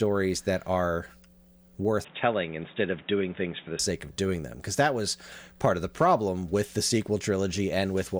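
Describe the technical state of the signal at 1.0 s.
At 1.0 s the speech signal is intact, with no audible dropout, distortion, glitch or other fault at that moment.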